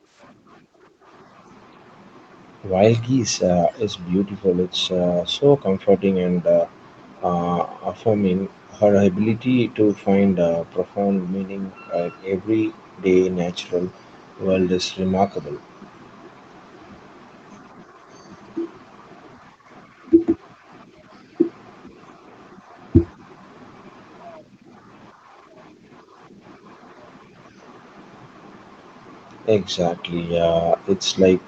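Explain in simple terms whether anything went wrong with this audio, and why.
From 0.12 to 0.21 s, a very faint copy of the speech comes back about 0.37 s late. It is likely an echo leak, where an echo canceller missed loudspeaker sound.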